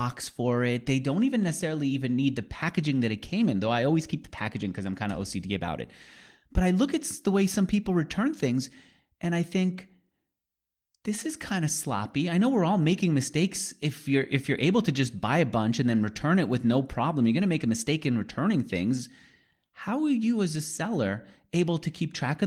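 No technical faults can be heard in this recording.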